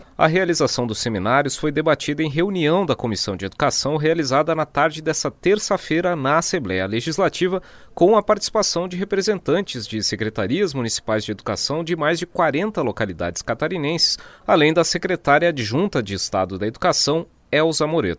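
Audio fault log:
No fault is heard anywhere in the audio.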